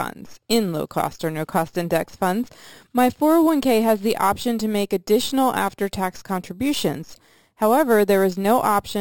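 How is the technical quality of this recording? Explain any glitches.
The recording has one fault, present throughout: imaging from sample-and-hold upsampling. Each sample was simply repeated, which points to a 12 kHz original raised to 44.1 kHz. Mirrored spectra fill 6 kHz to 12 kHz and above, at about -19 dB. The result is a bright, metallic fizz that tracks the speech level and moves against its pitch.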